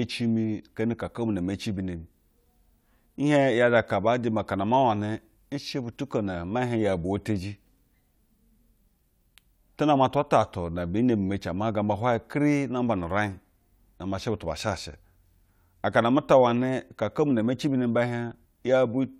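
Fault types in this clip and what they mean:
Clock slip clicks, 0.19 to 19.07 s: faint ticks recur steadily about five times a second throughout the speech, loudest on strong sustained sounds. The likely cause is two unsynchronised clocks differing by roughly 150 ppm, so single samples are periodically dropped or repeated.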